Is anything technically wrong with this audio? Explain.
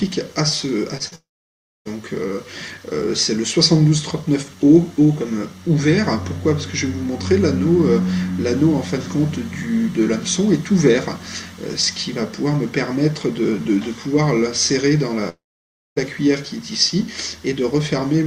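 Yes. Short concealed packet loss occurs at 0.97–1.02 s and 1.08–1.13 s. Missing packets were patched by extending the preceding sound, leaving brief smears or wobbles.

At 1.15–1.87 s and 15.29–15.98 s, the sound briefly trails on, then falls to near silence for about 0.6 s. A long network dropout is the likely cause.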